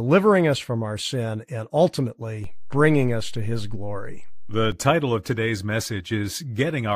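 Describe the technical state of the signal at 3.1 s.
A low thump at 2.44 s, just before "title of today's", marks a DC step: the waveform's zero line shifts by about -26 dBFS and holds through 3.1 s, ending at 4.72 s.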